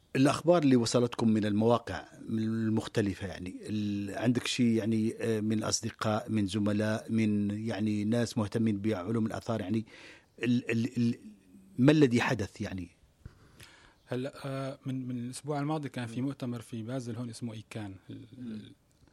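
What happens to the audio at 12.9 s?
Nothing goes wrong at 12.9 s; the audio is intact at that moment.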